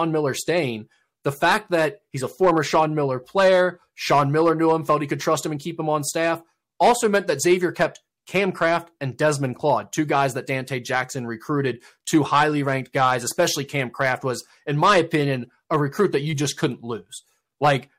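Hard clipping runs throughout this speech: the signal is driven about 10 dB past the ceiling, flattening around one percent of samples and adding harsh crackle on peaks.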